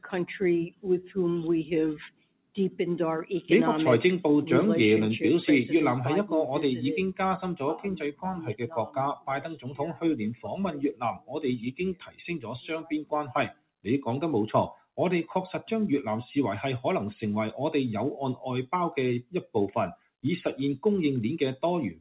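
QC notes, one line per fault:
Throughout: noise suppressor applied to non-speech sound; a speech-tuned suppressor treats sustained tones and tails as noise, so level swings by roughly 10 dB and pumps.
0.69–1.11, 2.09–2.79, 8.12–10.03, 10.72–13.12, 13.48–13.86, 19.23–19.55 s: sound cut by the noise suppressor; held or decaying sound sinks by about 16 to 18 dB while onsets pass.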